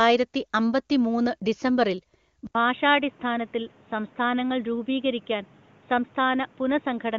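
At 2.47 s the sound drops out for 80 ms, then returns dull and boxy with nothing above 3.8 kHz, about 5 dB quieter, with new background noise. This is likely an input switched to a poorer device. The new noise and level change set it apart from a simple filter.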